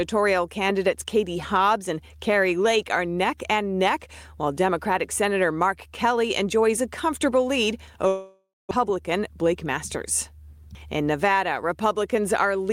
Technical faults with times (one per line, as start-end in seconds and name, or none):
8.07-8.73 long network dropout
9.29-10.07 jitter buffer speed-up